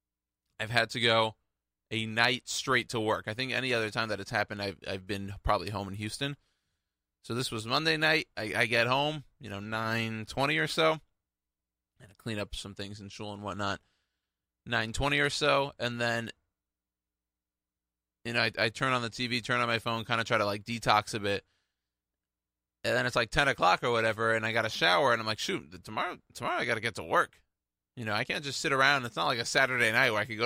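No technical faults can be heard anywhere in the recording. Nothing in the audio calls for a timestamp or further comment.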